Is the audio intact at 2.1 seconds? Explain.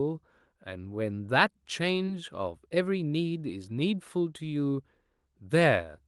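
No. From 2.05 to 2.10 s the speech briefly smears, a short blur or wobble. This is short concealed packet loss: about 20 ms of audio arrived too late, so the receiver extended the preceding sound to cover the gap, then blended back.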